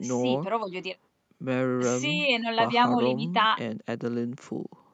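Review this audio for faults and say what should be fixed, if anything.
Nothing needs fixing: the speech signal holds steady in level and continuity, with no audible defect anywhere in the recording.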